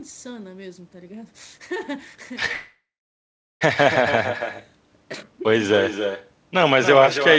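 The far end has echo with no canceller: its loudspeaker feeds the call back into its microphone and nothing subtracts it, so the voice returns after the network round trip. Throughout the speech, every phrase is trailed by a copy about 8 dB quieter, arriving roughly a third of a second late, thinner than the original. The audio stops above 8 kHz, which fits a G.722 wideband codec, and the echo carries that same band limit.

From 2.52 to 3.63 s there is a call audio freeze, likely caused by packets stalling in transit so the jitter buffer ran dry. The receiver stretches the last sound into a brief fading buzz or hiss, then holds about 0.77 s of silence before the speech resumes exactly where it broke off. The whole 1.09 s pause is inserted time. Nothing is lost, but everything after it plays that much later.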